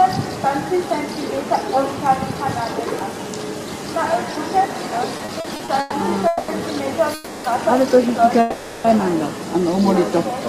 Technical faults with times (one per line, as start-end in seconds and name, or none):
5.17-5.94 repeated stalls (stutter)
6.27-6.51 call audio freeze
7.14-7.47 call audio freeze
8.40-8.87 call audio freeze